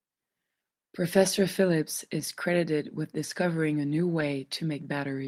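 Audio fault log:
2.19–2.21 s and 4.19 s, lost packet rebuilt from error correction: each dropped 20 ms packet was replaced by the lower-bitrate redundant copy carried in the next packet, so the speech continues without a gap but turns briefly rougher and noisier. On a spectrogram, a short smeared, grainier slice appears. The waveform shows no dropout.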